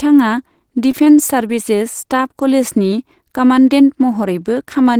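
Short concealed packet loss at 0.91–0.95, 1.05–1.08 and 1.48–1.51 s: 20 ms of speech each time was patched by extrapolation, heard as brief smears rather than silent dropouts.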